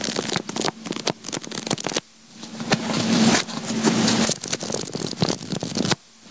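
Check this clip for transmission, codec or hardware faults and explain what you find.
One fault runs through the whole clip: gain pumping. The input gain is likely set far too high, so a fast limiter clamps down on every loud event, producing level swings of around 40 dB. The overall dynamics come out flattened and squashed. The call codec path sits underneath this, with nothing audible above 8 kHz, which fits G.722.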